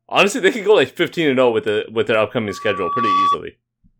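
A scratch on the disc is wiping out more data than the player's error correction can rebuild, once per rotation, so the player patches or silences the damaged samples. The result is CD scratch ticks from 1.68 to 2.14 s, just after "and zero oh with": four short, evenly spaced clicks, each under a millisecond, marking the disc's repeating turn as the damaged spot passes the laser.

From 2.48 to 3.37 s a microphone is picking up the loudspeaker it feeds, and at 1.1 kHz the loop's gain climbs past one, so that frequency keeps reinforcing itself. This loudspeaker feedback squeal starts as a faint single tone and swells over roughly three-quarters of a second until it is about as loud as the speech, then holds as a steady whistle on top of it.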